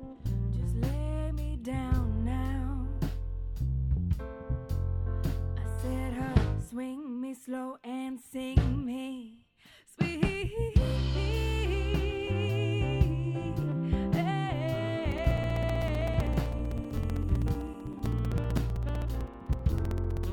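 From 15.05 to 20.24 s, periodic USB or driver dropouts cut roughly 4 ms of audio to silence every 64 ms, giving steady ticks. On a waveform these appear as evenly spaced gaps, and on a spectrogram as broadband vertical lines.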